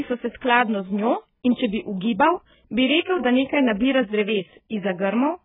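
Speech, heavily damaged by AAC compression throughout. Nothing survives above 3.8 kHz, leaving it dull, smeared and fizzy. The likely cause is a very low bitrate, around 8 kbps.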